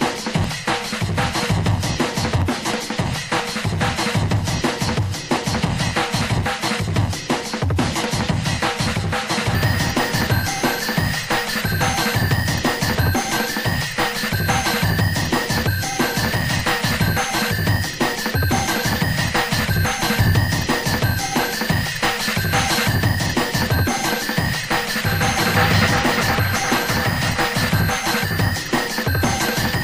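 A recording of sounds with small clicks or tiny skips at 0.44, 2.42, 4.39 and 6.36 s, roughly every 2 s, where the waveform jumps. This is overlap between stream segments, which fits 1-second segments: overlapping time stamps cause the player to trim real sound at those joins.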